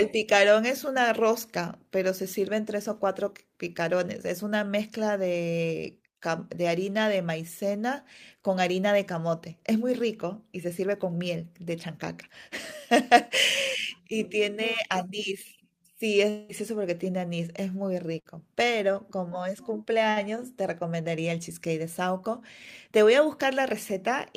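From 16.29 to 16.51 s the sound turns into a fading buzz or hiss for about 0.2 s with no true silence, likely a long network dropout; the spectrogram shows a smeared, frozen spectrum. At 18.19 to 18.27 s, a burst of packet loss leaves about 60 ms filled by a fading continuation, visible as a tapering waveform envelope. At 18.93 to 18.96 s, short concealed packet loss produces a brief smear, a small blurred patch on the spectrogram.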